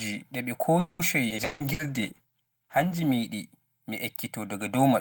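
Speech runs hollow and phasey from start to finish, the channel delay (comb filtering) of roughly 1.5 ms between channels cancelling evenly spaced frequencies from about 400 Hz upward once summed to mono. Right after "ɗi ɓe", from 0.79 to 1.82 s, the sound turns choppy and robotic: repeated packet loss leaves holes, the longest 200 ms, patched with 440 ms of stretched-out sound while 240 ms is gone. Inside that stretch, at 1.29 to 1.33 s, playback jumps forward almost seamlessly, a skip ahead discarding roughly a tenth of a second of late audio. From 1.38 to 3.39 s the voice grows rough and muffled, which points to a call bitrate drop from around 32 to 15 kbps that lasts about 1.8 s at its lowest. Between 1.65 and 2.95 s sounds are drawn out at unchanged pitch, running at 92% speed, as a jitter buffer slow-down repeats pitch periods to add 106 ms of reserve.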